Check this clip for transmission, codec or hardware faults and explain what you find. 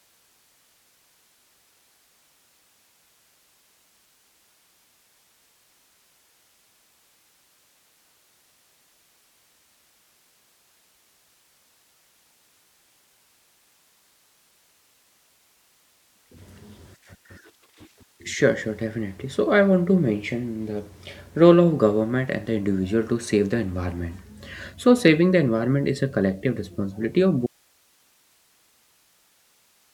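There is one fault, an audio dropout to a faint residue. At 27.47 s, straight after "a collective responsibility of", the speech cuts out abruptly and only hiss, roughly 40 dB below the speech, remains to the end, about 2.5 s. The hiss likely comes from a live path after a break in the signal feed. The instant cut and the steady hiss set it apart from a natural pause or fade.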